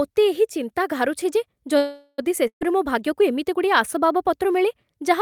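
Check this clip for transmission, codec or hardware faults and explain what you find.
Two transmission faults are audible, both in the middle of the clip. Neither comes from the codec or hardware.

The first is a call audio freeze from 1.77 to 2.24 s. The speech stops and the last sound is stretched into a fading buzz or hiss for about 0.4 s. Then the speech resumes exactly where it left off. Nothing is skipped. The cause is likely delayed packets that emptied the jitter buffer. The receiver padded the wait, so everything after it arrives about 0.4 s later.

The second is a burst of packet loss from 2.47 to 2.63 s. About 140 ms of speech is lost outright. The receiver fills the gap by extending the preceding sound and fading it down. For most of that span, roughly 90 ms, the fill has decayed to near silence. The speech then picks up further along, with the intervening portion gone. It sounds like a brief dropout followed by a small jump forward.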